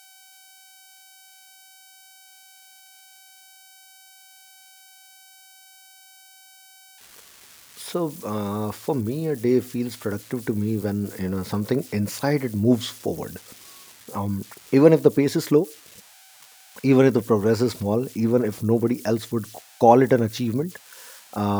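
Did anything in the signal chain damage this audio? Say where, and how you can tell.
Yes, at the converter. There are converter idle tones running through the whole speech clip: a whistle somewhere around 700 Hz sits in the pauses, and a grainy texture rides under the speech, at about 27 dB below the signal. That points to an undithered delta-sigma converter. With only a tiny input, its modulator settles into repeating bit patterns, and those cycles come out as a tone whose pitch follows the small offset at its input.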